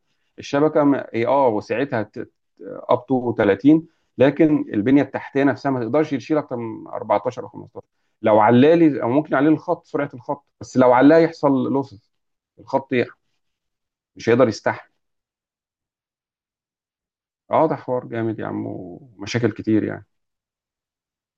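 No technical faults occur at any point in this speech recording.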